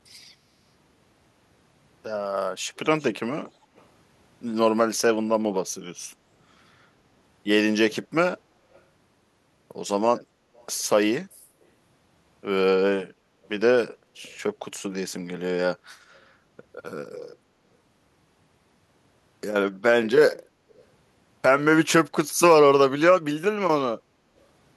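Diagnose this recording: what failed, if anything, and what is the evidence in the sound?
In call processing, the far end's echo canceller likely let part of its loudspeaker pickup through, producing echo leak: a faint copy of the speech, delayed 267 ms and roughly 30 to 40 dB down, surfaces at 2.76–3.04, 3.46–3.84, 8.74–8.81, 10.57–10.66, 16.16–16.2 and 20.69–20.84 s.

Also in call processing, the echo canceller gated the background. It ducked the microphone hard while its loudspeaker played, so the room tone sinks by about 7 dB between 13.14 and 13.39 s, for roughly a fifth of a second, before returning.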